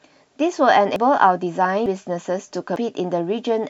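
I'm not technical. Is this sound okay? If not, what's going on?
No. The speech skips forward three times, at 0.96, 1.86 and 2.76 seconds. Each time, about a tenth of a second is gone. This is audio missing between chunks, likely from a recorder saving in one-second pieces and dropping a sliver at each join.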